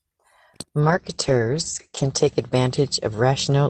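Speech with a call bitrate drop from 0.8 s to the end: the encoder's rate falls from roughly 40 kbps to about 10 kbps, so coding turns coarse and watery and the top end is cut from 20 kHz to 8 kHz, most muffled for about 1.3 s.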